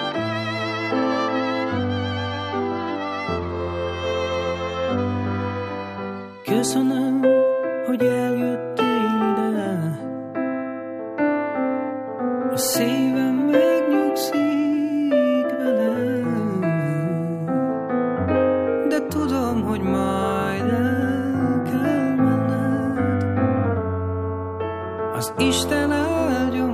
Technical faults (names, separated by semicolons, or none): none